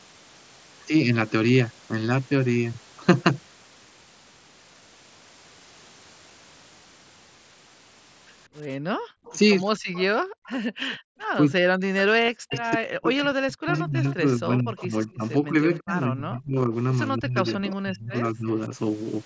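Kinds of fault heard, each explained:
Background gated by the echo canceller: the room sound gets clamped down hard, by about 37 dB, around 8.9 s and again near 10.2 to 11.1 s.
Echo leak: a faint copy of the far side comes back about 175 ms late, most clearly around 9.3 to 11 s, likely the echo canceller letting some through.
Speech suppressed in double talk: the talker's voice keeps dipping, up to about 40 dB, from roughly 11.4 to 18.7 s, likely the canceller ducking both sides during overlap.
Concealed Bluetooth headset packet loss: a brief 22.5 ms patch at 12.26 s, filled with a repeated waveform stretch, which fits about three lost headset frames.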